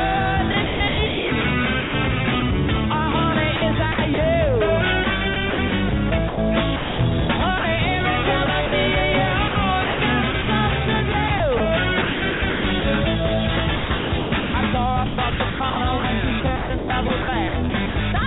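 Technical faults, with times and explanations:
0.52–4.18 s, 5.04–7.64 s, 8.46–12.84 s, 13.76–17.96 s: sound chopped by the voice detector, likely the sender's detector gating; quiet stretches swapped for comfort noise, so the sound has two or more holes.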